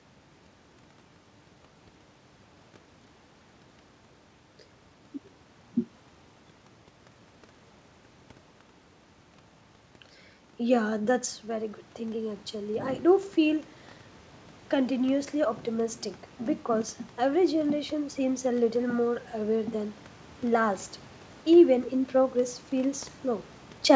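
At about 11 s the talker moves away from the microphone, and the level at the input drops by about 9 dB. From 10.84 s to 13.03 s, automatic gain rising follows. The gain control hears the quieter input and lifts its gain gradually, by about 4 dB over roughly two seconds. It only partly makes up the loss. The voice and the room noise swell together as the gain climbs, so the background rises along with the speech.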